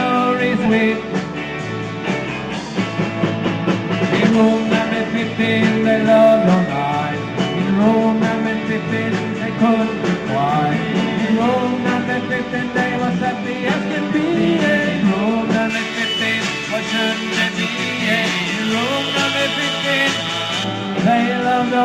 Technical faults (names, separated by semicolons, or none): skip ahead; jitter buffer speed-up; pre-emphasis left on